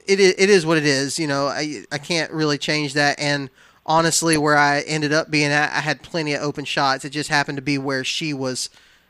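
Speech clip with DAB burbling from 3.99 to 4.39 s, heard as short blips of noise in sub-bands as bit errors slipping past error correction corrupt MP2 audio data, likely from weak reception.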